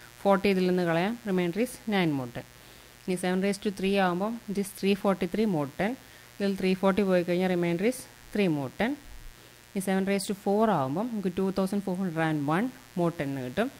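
From the first moment to the end, there's a mains buzz running under the sound, locked to a 60 Hz supply. Something like a dimmer, a rectifier or a poorly shielded cable is letting sharp switching spikes into the line twice per cycle, so you get a dense stack of 60 Hz harmonics climbing into the kilohertz range. It sits roughly 25 dB below the signal, steady and raspy rather than a smooth hum.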